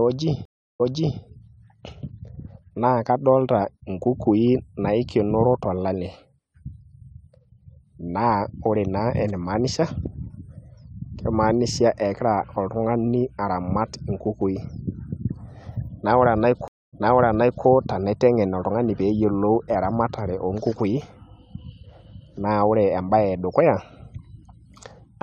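Stream reconnects at 0.45 s and 16.68 s: after 343 ms and 247 ms of silence, speech resumes 418 ms and 720 ms earlier, repeating material, which a simple dropout wouldn't.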